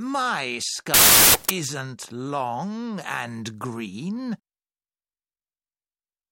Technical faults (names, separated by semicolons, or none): wrong sample width